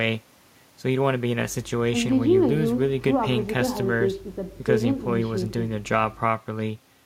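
Nothing here jumps out as a technical fault; the speech comes through steadily with no dropouts, clicks, glitches or odd jumps in level anywhere along the way.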